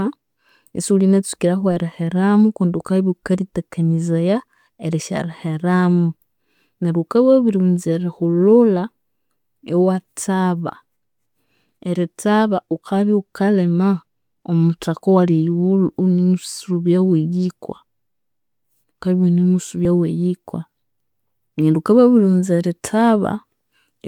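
At 19.85 s the speech jumps forward. About 30 ms is missing. This is likely a dropped buffer (overrun), the samples overwritten before being read.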